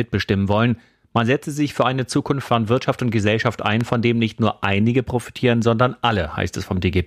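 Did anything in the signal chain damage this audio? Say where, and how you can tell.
Yes. There is one loud pop, from 3.81 s to 3.83 s. It is a single sharp thump that stands well above the speech, peaking roughly 10 dB higher. The speech continues underneath without a break. That points to something added to the signal, not a gap or dropout. The likely stage is the analogue wiring, where a plug movement, switch contact or static discharge put a brief voltage pulse into the line.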